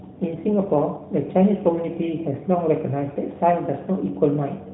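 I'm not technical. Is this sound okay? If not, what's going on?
Yes, I listened and nothing stood out as a problem in this speech.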